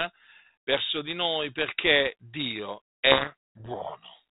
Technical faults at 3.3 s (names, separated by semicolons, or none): codec payload misread